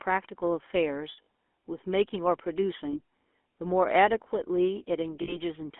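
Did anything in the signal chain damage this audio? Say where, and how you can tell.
Yes. At the codec stage, the GSM full-rate codec runs throughout: a buzzy, gravelly roughness over a 250 Hz to 3.4 kHz band, which fits 13 kbps full rate. The pulse-driven grit sets it apart from simple telephone band-limiting.

At the network stage, lost GSM frames occur at 1.12–1.27 s (scattered, longest run about 70 ms), 2.92–2.99 s and 5.22–5.38 s. The last good frame repeats as a metallic ring rather than a clean dropout or click.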